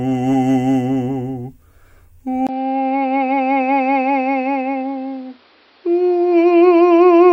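At 2.47 s the music drops out for about 20 ms, then returns dull and quieter, roughly 10 dB down, with nothing above 5.6 kHz and new background noise about 35 dB underneath. That points to the likely cause, an input switched to a poorer device mid-recording. A spectrogram shows the top band cut off flat from there to the end, and the waveform shows a brief gap and a smaller envelope.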